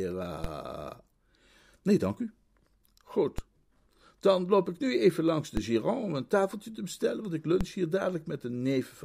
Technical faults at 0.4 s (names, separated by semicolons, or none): DC step